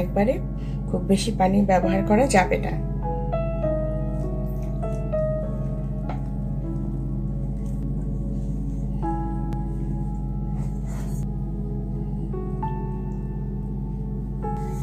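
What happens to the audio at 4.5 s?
At 4.5 s, as everywhere else in the clip, a ground loop or nearby transformer is leaking the power line into the signal path, producing mains hum: a steady 50 Hz drone with low harmonics, only a little quieter than the sound itself.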